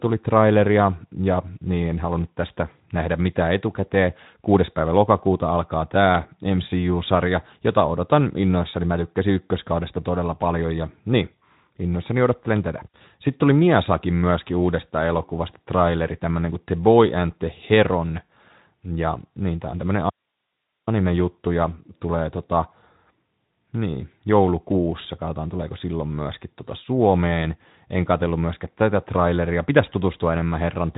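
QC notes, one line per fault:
20.10–20.87 s, audio dropout to a faint residue: the speech cuts out abruptly for about 0.77 s and the gap holds only a low hiss, roughly 55 dB below the speech, before the signal returns just as suddenly. The onset and return are hard edges, unlike a pause or fade, so the likely cause is a brief loss of the incoming signal while the path after the break stayed live. The Speex-coded band, which stops near 3.8 kHz, resumes unchanged.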